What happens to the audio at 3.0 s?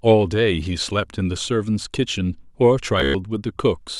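A brief buzzing stutter from 3.00 to 3.15 s: Bluetooth stutter, where late packets made the receiver repeat its last slice, dropping about 131 ms.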